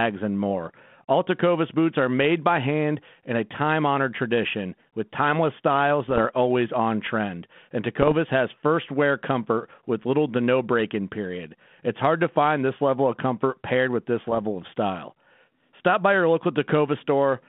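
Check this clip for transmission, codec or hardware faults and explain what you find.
Three short bursts of bit errors on an ADPCM link occur. They fall at 6.05–6.21 s, between "tradition with timeless styles" and "are always on trend"; at 8.00–8.13 s, just before "has first wear comfort"; and at 14.28–14.41 s, between "comfort paired with this" and "of style". The narrowband G.726 ADPCM path carrying them, which fits 32 kbit/s, sounds as expected. Each flipped bit corrupts the decoder's adaptive step size and predictor, so the damage rings on briefly as pops, rasp and jumps in level. Packet loss would instead leave gaps or smoothed-over fills, not this rough, noisy ringing.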